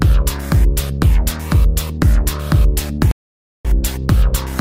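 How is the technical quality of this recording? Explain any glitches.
There's one real glitch here, a stream reconnect at 3.11 s that runs to about 3.68 s. The audio drops out for roughly 0.53 s, then comes back about half a second further along than where it left off. That's the connection falling over, the player going quiet while it reconnects, then spinning up a fresh decoder mid-stream. So you hear a clean hole followed by a jump ahead, with a chunk of sound simply skipped.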